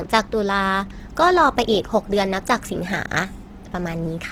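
From the first moment to the end, the speech carries Opus compression damage that is plainly audible. The sound is grainy and rough, with bands filled by noise rather than left empty, which fits the music (CELT) mode at a low rate around 16 kbps. The band stays wide, with energy reaching about 20.2 kHz. On a spectrogram the upper bands look speckled and noisy, not cleanly harmonic, with few blank holes.

From 0.19 s to 4.13 s there are faint, evenly spaced ticks, about every fifth of a second, some twenty in all. These are clock slip clicks, likely from two devices running on unsynchronised clocks drifting apart by something like 100 parts per million, so a single sample is dropped or repeated each time the error adds up to one sample. On a waveform each slip shows as a tiny one-sample step; on a spectrogram, as faint thin vertical lines at a regular spacing.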